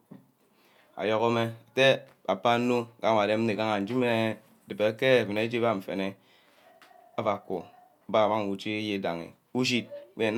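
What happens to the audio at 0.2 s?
Nothing goes wrong at 0.2 s: the speech plays through intact at that point.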